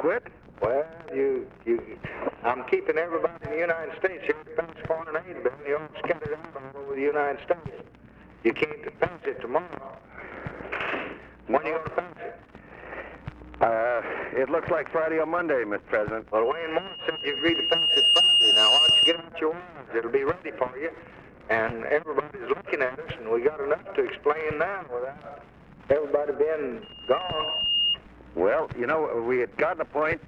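At 16.45 s a loudspeaker feedback squeal begins. The microphone picks up its own loudspeaker, and the loop gain tops one near 2.8 kHz. The tone swells over about a second and a half, ringing well above the sound, until 19.28 s. A quieter, quicker repeat runs from 26.82 to 27.97 s.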